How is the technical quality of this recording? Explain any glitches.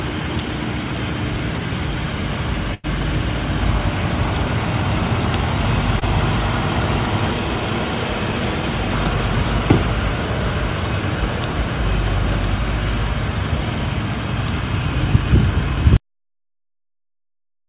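The recording has two dropouts from lost call packets, heard over band-limited audio that stops at 4 kHz, which points to a narrowband telephone codec such as G.711.

From 2.74 to 2.86 s there is a burst of packet loss: about 100 ms of audio never arrived, so the receiver stretched the last sound and faded it out. It comes across as a held buzz or hiss before the audio resumes further on. On a spectrogram it appears as a smooth, decaying smear, and the waveform shows a shrinking envelope.

From 6.00 to 6.03 s comes a short concealed packet loss. Roughly 20 ms went missing, and the decoder patched the gap by continuing the preceding sound and blending back into the real audio. It is heard as a quick smear or wobble, visible as a brief blurred patch in the spectrogram.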